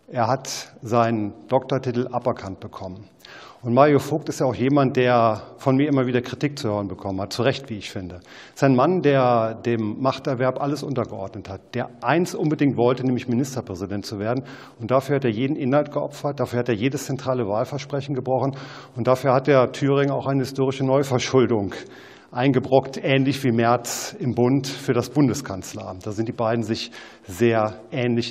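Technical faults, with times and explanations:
There are no technical faults to report in this audio. Nothing in it calls for a time or an explanation.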